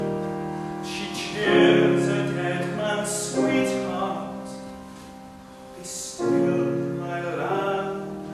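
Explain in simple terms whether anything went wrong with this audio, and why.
Nothing went wrong: no dropouts, clicks, distortion or other faults are audible anywhere in the audio.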